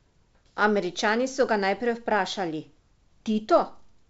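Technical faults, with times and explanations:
The speech comes through an ordinary call path with nothing above 8 kHz, a wideband limit that points to a G.722 call codec, and no technical fault can be heard.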